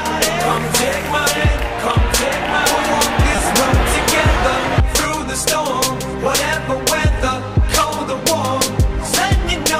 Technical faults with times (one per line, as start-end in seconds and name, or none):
3.36 repeated buffer